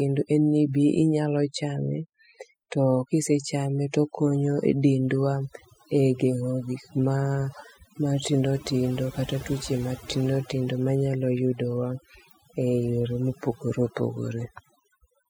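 Overdone noise removal runs through the whole clip. A noise reduction stage set too strong cuts individual frequency bands whenever they sit near its noise estimate, taking quieter parts of the voice with them, so the background drops and breaks up into twinkling, warbling specks.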